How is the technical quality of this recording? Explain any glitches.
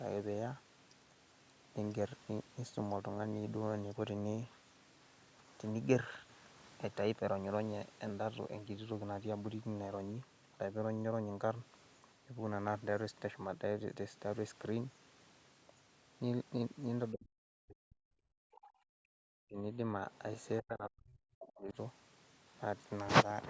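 The last third of this speech recording has clear echo-canceller trouble during two-way talk, with three separate faults between 17.1 and 21.8 s. The audio itself extends up to 8 kHz, as expected from call microphone processing.

Speech suppressed in double talk occurs at 17.11–18.12, 19.46–19.80 and 20.61–21.76 s. The talker's voice sinks deeply, by roughly 40 dB in the first and last, and less in the middle. This is likely the canceller muting both voices at once. Unlike gating, the speech itself is lost.

Background gated by the echo canceller occurs from 18.40 to 19.18 s. The room sound drops by about 40 dB while the far end plays, then returns. Only ambience vanishes, not active speech.

The other side's voice leaking through appears at 18.52–18.61 and 20.14–20.18 s. Brief, faint scraps of a second voice sit far below the talker, likely residual loudspeaker echo the canceller missed. 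This adds sound rather than removing it.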